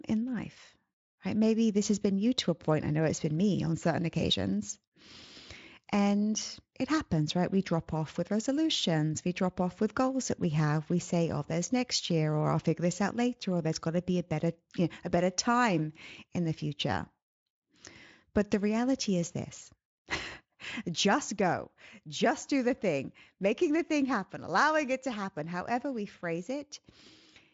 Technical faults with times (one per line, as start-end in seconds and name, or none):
none